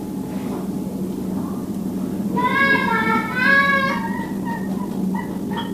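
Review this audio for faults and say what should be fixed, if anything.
Time-stretched section, 3.66 s to 5.73 s: pace jumps to 1.62 times speed at unchanged pitch, rushed, likely software dropping short pieces. To prevent it, edit or re-record the material to fit the required length instead of squeezing it with time-stretching.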